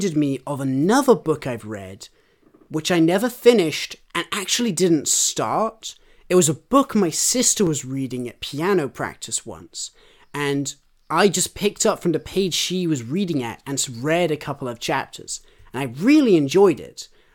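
Overlapping chunks: each 5 s block restarts about 6.5 ms early, replaying that sliver as a click at 2.66 s after "another book I've read" and 7.67 s after "a book my sister".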